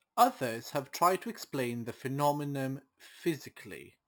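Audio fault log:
throughout, imaging from sample-and-hold upsampling: Samples were repeated without smoothing, which fits a 12 kHz source. A mirrored copy fills 6 to 12 kHz, about 18 dB down. It sounds like metallic fizz.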